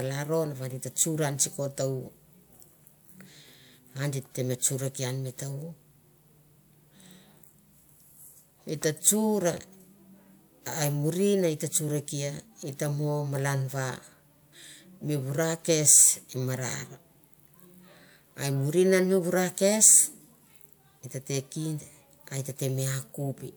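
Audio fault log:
Nothing to flag here; the speech comes through without a single fault worth logging.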